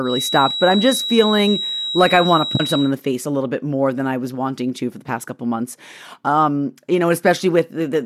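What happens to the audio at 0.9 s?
At 0.9 s a thin, steady whistle at about 3.9 kHz sits a little beneath the speech, swelling and fading slowly in level, from the start of the clip to 2.94 s. This feedback whistle likely comes from a loudspeaker-to-microphone loop held just at the edge of feedback.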